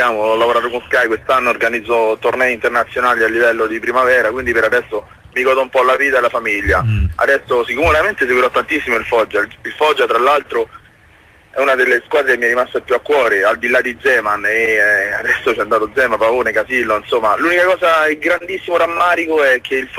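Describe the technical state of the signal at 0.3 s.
At 0.3 s you're inside a stretch of repeated timing corrections running from 0.17 to 19.70 s, with the pace sitting around 99% and roughly a fifth of a second added overall. It comes across as faint hiccups and a slightly unsteady tempo. Behind it is clock drift between sender and receiver: the sender's clock runs about 2% slow, so the receiver's buffer keeps draining and it patches in short repeated pieces.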